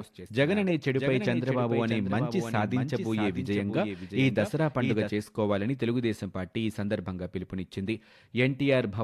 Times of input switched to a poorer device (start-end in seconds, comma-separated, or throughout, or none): none